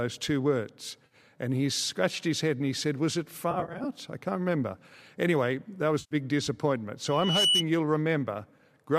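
Right after "two words", at 1.06 to 1.15 s, the speech turns briefly smeared and noisy. This is AAC frame loss with concealment. About 50 ms of stream went missing, which fits five frames of the 10 ms length used by the low-delay AAC-ELD coder that is likely carrying this audio. The decoder bridged the gap by reusing the last good spectrum. Unlike a hard dropout, there is no silence or click, only a phasey blur.

The same fault returns at 3.51 to 3.85 s, just before "I can't remember". Here about 170 ms is lost, scattered over 340 ms in short runs of up to roughly 50 ms, so the blur flickers rather than holding. A third patch at 6.0 to 6.15 s loses 110 ms.

From 7.08 to 7.64 s a loudspeaker feedback squeal appears. A single tone at 2.9 kHz swells by itself over about a third of a second until it sits about 5 dB above the speech. The swelling sets it apart from a steady interfering whistle. 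It happens because the microphone is re-amplifying its own loudspeaker, with loop gain above one at that frequency.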